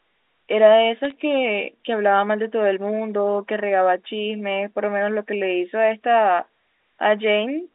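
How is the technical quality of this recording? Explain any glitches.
The recording has one glitch: a brief burst of bit errors on a digital phone line, from 1.05 to 1.12 s, heard against the narrowband telephone sound of a G.711 line. Flipped bits, at a rate of roughly 0.2 percent, each corrupted a single logarithmically coded sample. Where a sign or high-order bit was hit, the sample jumped sharply, producing a short cluster of sharp ticks and crackle laid over the speech without otherwise altering it.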